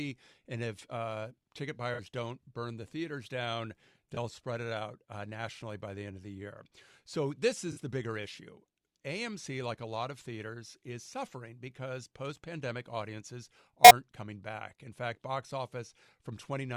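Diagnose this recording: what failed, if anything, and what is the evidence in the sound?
The failure is at the codec stage: corrupt frames concealed by the AAC decoder. In this speech there are four short concealed spots, at 1.93–2.00 s between "if uh ticket" and "don't burn the theaters", at 4.15–4.17 s after "burn the theaters down", at 7.72–7.79 s, and at 13.84–13.91 s before "coming back". Each spot fits two or three damaged frames. The decoder caught the bad bits and papered over them rather than squeaking.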